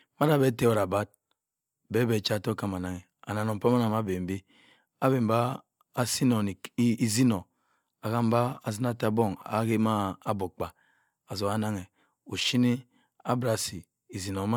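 Nothing goes wrong anywhere in this bit of speech, so there's really no technical fault to point to at any moment.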